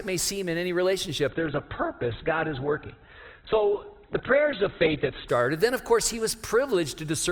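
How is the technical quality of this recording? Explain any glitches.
Quality drops sharply for part of the recording. From 1.29 to 5.29 s, the adaptive stream switches to a lower bitrate. A slowed connection makes the player fetch a leaner encoding. Nothing above 4.2 kHz survives, so the sound turns dull, with stronger codec artefacts. The switch is abrupt, without a gap. This fits Opus dropping from about 64 kbit/s to about 8 kbit/s.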